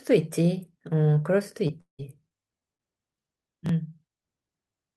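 Repeated packet loss (robotic sound) runs from 1.67 to 2.81 s. Six separate gaps open in the speech over this stretch, the longest 178 ms, and each is bridged by stretching out the sound that came just before it. Around a quarter of the span ends up as this patched-in material, and the holes come close enough together that the speech turns choppy and mechanical, with a robotic edge and pieces audibly dropped.

Chunks out of order occur at 3.66 to 3.69 s. A 10 ms slice of audio reaches playback two chunks late, so it sounds after the material that should follow it. Nothing is missing, but the sequence is scrambled across three abrupt joins, and the result is a brief garbled stumble in the speech, over almost as soon as it starts.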